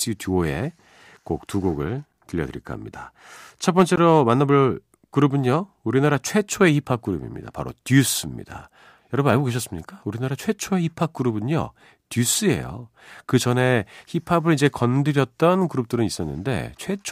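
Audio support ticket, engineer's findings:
A sharp tick and a short hole in the speech, at 2.13 s and 3.96 s. Block of digital silence: samples dropped to silence with no fade. Buffer underrun likely, with the 5.3 ms gap fitting a 256-sample block and the second gap 16 ms.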